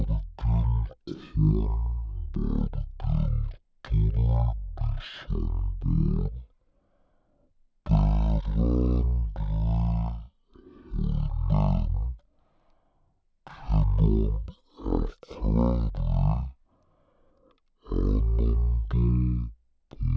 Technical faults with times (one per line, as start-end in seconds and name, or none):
0.00-20.17 wrong sample rate